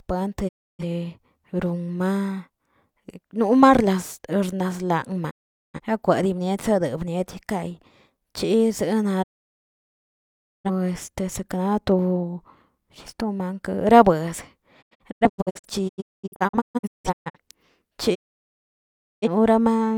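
Speech, broken by digital broadcast dropouts. The receiver loses good frames and mutes, fading out over about 20 ms. Silences fall at 0.47 to 0.84 s, 5.29 to 5.80 s, 9.22 to 10.70 s and 18.14 to 19.28 s. From 14.81 to 17.37 s, several short holes scatter, none longer than 0.21 s. The missing speech is lost.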